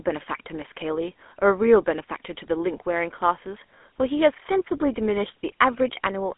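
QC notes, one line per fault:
Throughout: GSM full-rate codec. The speech is squeezed into a 250 Hz to 3.5 kHz telephone band with nothing above 3.8 kHz, and the pulse-driven vocal-tract model leaves a plainly audible buzzy, gravelly roughness, consistent with a 13 kbit/s GSM stream.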